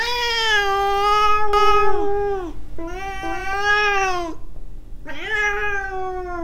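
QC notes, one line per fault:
1.53–3.53 s, doubled audio track: a second, equally loud copy of the sound trails the original by roughly 400 ms, cutting in and out abruptly with no decay or room colour. This likely comes from a slower capture path or an edit holding two misaligned copies.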